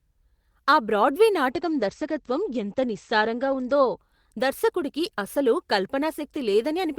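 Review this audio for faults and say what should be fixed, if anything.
A call bitrate drop runs from 1.51 to 4.03 s. The encoder received too few bits, so the speech turns coarse and muffled, with its top end cut from 20 kHz to 8 kHz. This fits a fall from around 32 to 14 kbps. Unlike packet loss, it stays continuous without gaps or glitches. Prevent it with steadier bandwidth estimation or a higher minimum bitrate floor.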